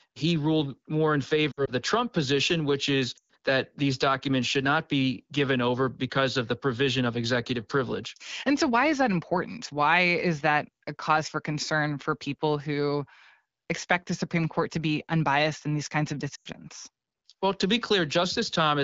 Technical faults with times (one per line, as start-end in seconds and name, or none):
1.52-1.71 lost AMR speech frames
3.17-3.30 lost AMR speech frames
16.35-16.48 lost AMR speech frames